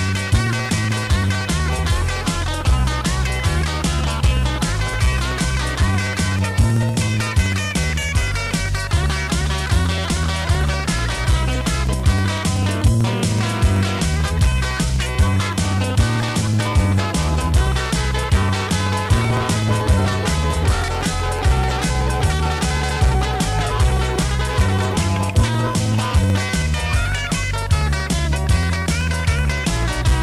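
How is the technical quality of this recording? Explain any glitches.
The recording has one fault, and it runs nearly the whole length: periodic USB or driver dropouts from 0.09 s to 30.14 s. Every 0.063 s, about 16 times a second, something stalls the USB link or audio driver and roughly a millisecond of audio is skipped outright, with the signal closing up across the gap. Each splice leaves a small discontinuity, so the sound carries a steady, rapid ticking or buzzy crackle that comes through only while signal is present.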